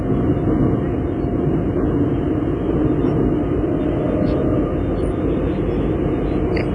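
From start to finish the sound has a ringing, washy quality, with a hiss that swells and fades along with the signal, and nothing at all above 10.6 kHz. That points to WMA compression, likely applied at a low bitrate, which fits something around 24 kbps. The transform encoder smears its quantisation noise across long blocks, spreading it tens of milliseconds around each event. It also throws away the weaker spectral detail and the whole top band, so the damage is heavy throughout.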